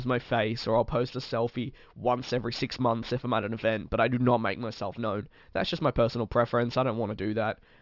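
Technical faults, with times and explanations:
Throughout, aliasing: the speech was brought down to a lower sample rate with no anti-alias filter ahead of the conversion, which fits a drop from 48 kHz to 12 kHz. Everything the original held above 6 kHz folds back down across that new band edge onto unrelated lower frequencies, sitting roughly 25 dB below the speech. Sibilants turn gritty and metallic, and the spectrum stays dense right up to 6 kHz instead of rolling off.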